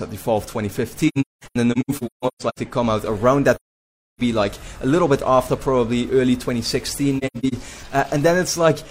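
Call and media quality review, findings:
AAC frame loss with muting, decoder zeroing the spectrum of missing frames. Soft-edged gaps. 1.08–2.59 s: about 0.94 s lost in scattered holes, longest about a fifth of a second. 3.55–4.21 s: solid 0.64 s hole. 7.18–7.54 s: scattered holes, longest about a tenth of a second.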